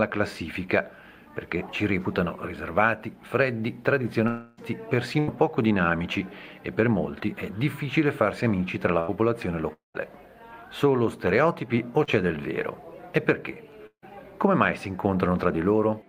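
At 4.27 to 4.59 s comes a long network dropout. The sound smears into a held, fading tone that fills the whole gap, which points to a likely stretch of about 0.3 s of audio never arriving. The audio then resumes further on. On a spectrogram the harmonics freeze into flat horizontal bands that dim over the gap, and the waveform shows a smooth repeating pattern shrinking in amplitude.

Bursts of packet loss follow at 5.19 to 5.29 s and 8.99 to 9.17 s, each losing about 80 ms. The receiver stretches the last sound into a brief buzz or hiss that fades before the audio jumps ahead. A spectrogram shows a short smeared block with blurred edges. At 8.99 s the waveform also shows a splice where the resumed audio joins.

The second long network dropout, at 9.73 to 9.96 s, fills briefly and then goes silent for about 160 ms before the audio returns. The waveform flattens to a near-empty trace, and the spectrogram shows a dark gap after a fading smear, likely from about 0.22 s of lost audio.

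At 12.04 s, a short concealed packet loss of about 40 ms gives a tiny wobble or smear. It shows as a discontinuity in the harmonic lines.

At 13.87 to 14.04 s, a third long network dropout fades out and leaves about 90 ms of silence. About 160 ms is missing, likely lost in transit, and the spectrogram shows the same fade followed by a dark gap.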